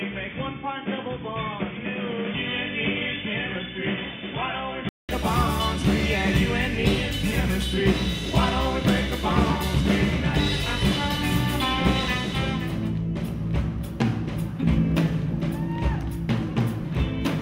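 From the start to 5.09 s the sound is dull and boxy, with nothing above 3.5 kHz, about 5 dB quieter, and carrying its own background noise roughly 45 dB below the signal. A silence of about 200 ms then leads into fuller, brighter audio. This is likely an input switched to a poorer device. Unlike a simple band-limiting filter, the level, tone and noise floor all change together, and the gap marks the handover.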